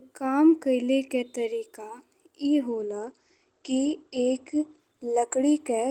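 A call bitrate drop hits from 2.68 s to the end: the encoder falls from 32 to 13 kbps, coarsening the speech and cutting its bandwidth from 20 kHz to 8 kHz, so it sounds muffled.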